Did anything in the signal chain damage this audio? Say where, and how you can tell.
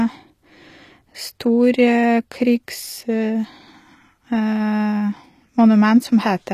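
Yes. HE-AAC compression runs throughout the speech, at the codec stage. The sibilants have a gritty, metallic, lispy edge, and the treble stops dead at about 14.9 kHz. That pattern is likely spectral band replication: the encoder kept only the lower band and rebuilt the highs by copying lower content upward under a coarse envelope, so the harmonics no longer line up. The plainly audible damage fits a low bitrate around 24 kbps.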